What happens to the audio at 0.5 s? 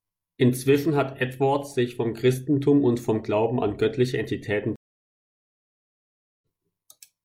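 At 0.5 s the speech plays through cleanly, with no dropout, click, distortion or other fault at that moment.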